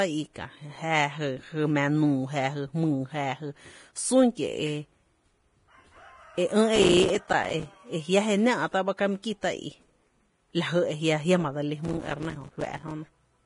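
Throughout the speech a grainy, hissy texture sits over everything, with roughened tones and smeared consonant attacks, and nothing is heard above 10.6 kHz. This is heavy Vorbis compression, which fits a low bitrate of around 30 kbps. The codec likely kept only a smooth spectral outline plus a coarsely quantised residue, so fine treble detail turned into noise of similar energy, and the top of the spectrum was cut away entirely.

From 6.76 to 7.66 s a burst of gritty crackle tears across the sound and then stops. This is processor overload crackle. The processor repeatedly failed to finish its small audio buffers on time, each lasting a few milliseconds, and dozens of them were missed over that short stretch. Every miss left a tiny hard-edged gap of silence, and together the gaps form that rough tearing.

At 8.97 s a short hiss arrives just before a sharp attack, which itself sounds softened. 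This is pre-echo, spread over about 16 ms. The transform codec distributed its quantisation noise evenly across the whole block, so noise scaled for the loud onset also leaked into the quiet moment ahead of it.

The processor overload crackle returns from 11.85 to 12.91 s with the same gritty tearing, this time across a longer stretch of missed buffers, each again filled with silence.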